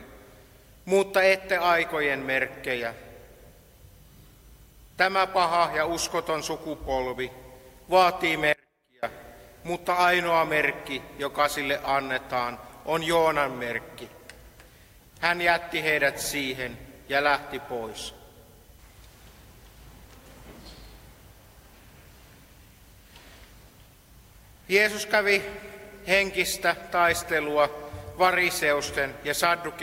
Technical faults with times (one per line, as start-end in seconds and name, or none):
8.53-9.03 audio dropout to a faint residue